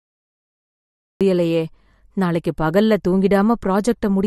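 A cut-off start runs from 0 to 1.21 s in this speech clip: digital silence, then the sound begins abruptly mid-sound at 1.21 s with no natural attack. MP3 compression damage is plainly audible throughout, likely from a low-bitrate encode, around 48 kbps. Nothing remains above 12.5 kHz, and the starved quantisation leaves a watery, swirly texture.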